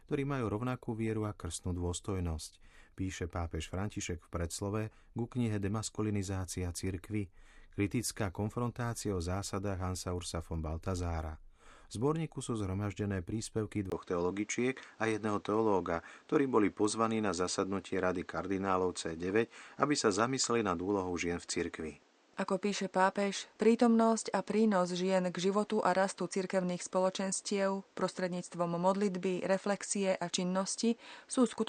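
Right after "zborníku sú zhromaždené príspevky" at 13.9 s there's a 20 ms gap, then the speech goes dull and boxy through to the end. Nothing comes through above 8.8 kHz, the level shifts by around 5 dB, and a new noise floor sits roughly 35 dB down. Likely the input switched to a poorer device.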